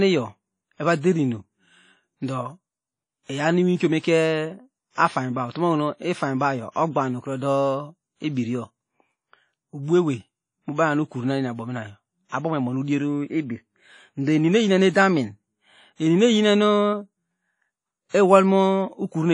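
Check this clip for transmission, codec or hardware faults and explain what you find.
The speech carries two codec faults: a general transform-coding degradation across the whole clip, and two brief pre-echoes.

WMA compression runs throughout. A transform codec, likely Windows Media Audio, has quantised the signal coarsely over long blocks, and nothing is left above 10.1 kHz. The damage is plainly audible, which fits a low bitrate around 32 kbps. The speech sounds dull and washy, with ringing around sounds and a hiss that rises and falls with the level.

Pre-echo occurs at 12.29 to 12.32 s and at 18.09 to 18.14 s. In each case a sharp attack lands late in a coding block, and noise scaled for the loud onset spills into the quiet stretch before it. A short hiss leads each attack by about 34 ms and 51 ms respectively, and the onsets sound softened and smeared.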